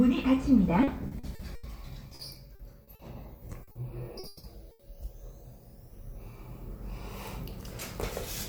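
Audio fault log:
0.83–1.66 s, repeated packet loss (robotic sound): five gaps, longest 80 ms, each patched by extending the last sound, leaving choppy stretches with pieces missing.
2.15–3.02 s, repeated packet loss (robotic sound): four gaps up to 40 ms, each filled by continuing prior sound, giving a choppy patch.
3.63 s, 3.71 s and 4.19 s, short concealed packet loss: 40 ms holes each filled from the preceding sound then blended back, heard as brief smears or wobbles.
4.27–4.46 s, long network dropout: about 160 ms never arrived, likely a network outage; the last sound is stretched into a fading buzz or hiss before audio resumes further on.
4.71–4.82 s, burst of packet loss: 80 ms lost in a row, concealed by holding and fading the last sound, then playback jumps ahead past the missing part.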